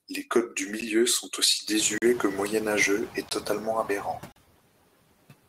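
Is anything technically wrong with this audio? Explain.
Yes. Three kinds of fault can be heard.

Noise suppressor artifacts run through the whole clip. The suppressor cuts bands it judges to be steady noise, by about 21 dB here. The noise dips in the pauses and swells under the speech.

Blocks of digital silence occur four times: at 0.81 s, between "codes du" and "sont aussi"; 1.98 to 2.02 s; 3.29 to 3.31 s; and 4.32 to 4.36 s. Samples were zeroed with no fade. The 10 ms gap is a tick, and the 40 ms gaps are short holes.

Noise suppressor catching up occurs from 1.79 to 3.16 s, after "sont aussi". The room noise jumps by about 20 dB around 2 s. The suppressor's estimate lags, so at first the noise is cut by only about 5 dB. It then sinks over roughly 1.33 s as the estimate adapts.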